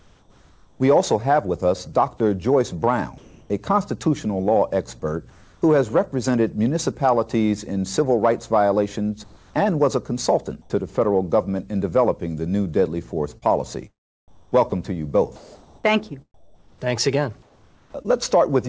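At 0.00 to 0.80 s, 3.18 to 3.50 s, 5.30 to 5.62 s, 9.24 to 9.54 s and 10.62 to 10.70 s, the quiet background, roughly 31 to 34 dB below the loudest sound, turns smoother and flatter. Its level shifts by about 3, 0, 4, 1 and 6 dB down respectively. This is comfort noise in place of the background, likely because the sender paused transmission and the receiver synthesised noise to fill each gap.

From 13.38 to 18.06 s, the sound drops out repeatedly, with holes totalling about 1.78 s filled by that same synthetic hiss. This is sound chopped by the voice detector: the sender's detector likely kept toggling transmission off and on through this stretch. Throughout, nothing reaches above 8 kHz, which fits a G.722 call path at 64 kbps.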